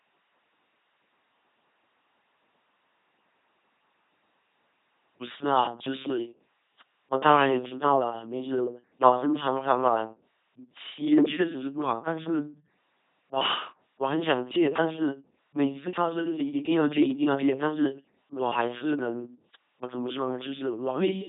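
From start to finish the speech has a buzzing, mechanical robot quality, with hiss replacing buzz in places, or buzz replacing hiss, wherever voicing was misjudged, and nothing above 3.8 kHz. This is the LPC-10 vocoder, heavily damaging the sound at a rate that fits its 2.4 kbit/s mode. It rebuilds each moment from a short all-pole tract filter fed by either a pulse train or noise, never a mix.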